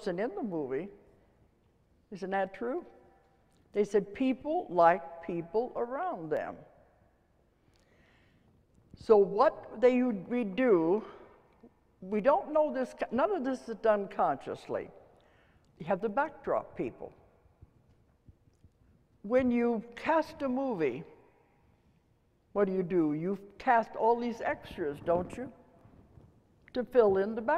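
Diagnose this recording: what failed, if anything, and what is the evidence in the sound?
A regular click recurs every 1.94 s from 0.52 s to 25.81 s, pointing to the driver or buffer stage. These are likely clock drift buffer slips, where a clock mismatch of about 200 ppm drops or repeats roughly fifteen samples per slip. Unlike random dropouts, the interval never varies.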